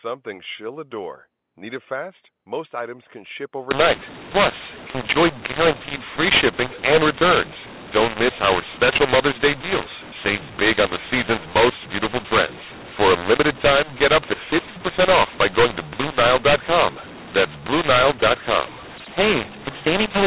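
Right after "items can ship", at about 3.71 s, the speech turns harsh and gritty to the end. That's mu-law and A-law mixed up: the mu-law telephone stream gets decoded as A-law, scrambling levels and filling the pauses with hiss, all still within the 4 kHz telephone band.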